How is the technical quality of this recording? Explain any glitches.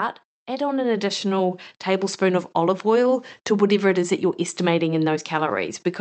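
One fault stands out in this speech clip, heard through a call codec whose top end stops around 8 kHz. From 0.46 to 2.9 s, just before "to whatever it is", voice and background swell together by about 7 dB. This is automatic gain rising: the gain control judged the input too quiet and gradually raised its gain.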